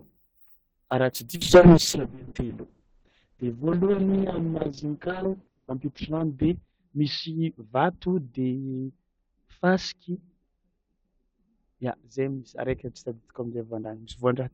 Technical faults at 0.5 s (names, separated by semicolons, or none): none